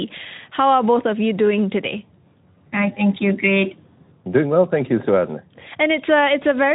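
No technical faults can be heard in this speech.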